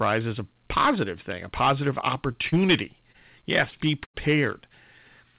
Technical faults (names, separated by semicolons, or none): hard clipping; short concealed packet loss; burst of packet loss